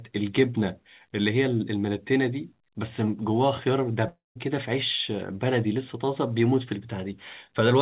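Speech heard through a narrowband call path, with nothing above 4 kHz as fits a G.711 codec, has one break from 4.08 to 4.37 s. The last sound carries on as a fading buzz, then drops to silence for about 170 ms, and the audio resumes with about 280 ms of content skipped, which is likely a long network dropout. A brief packet-loss glitch would be smoothed over almost unnoticed. Here the concealment runs out into silence and the lost stretch never returns.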